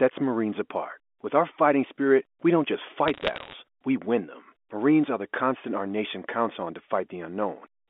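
Bit errors on a digital phone line run from 3.08 to 3.53 s, a burst of sharp ticks and crackle laid over the speech. The speech itself passes through a G.711 A-law telephone channel limited to roughly 250 Hz to 3.5 kHz. In that stream, individual bits were flipped, around one in two hundred. Each flip corrupts a single 8-bit sample. When a high-order bit, or the sign bit of a loud sample, is hit, the sample jumps far from its neighbours and produces a click. Many such hits in close succession merge into crackle.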